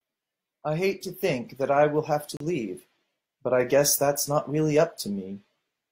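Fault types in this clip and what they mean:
Gap between stream segments: mismatched segment timestamps leave a hole the player fills with silence, so the speech cuts out abruptly for about 35 ms at 2.37 s.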